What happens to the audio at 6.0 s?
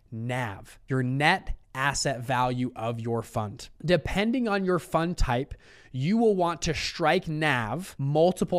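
Nothing goes wrong at 6.0 s; the speech carries straight through that point with no dropout, click, distortion or other fault.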